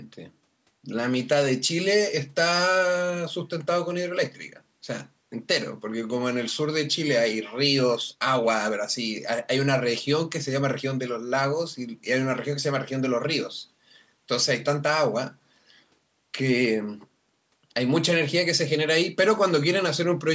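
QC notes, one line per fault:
No faults to note in this speech clip.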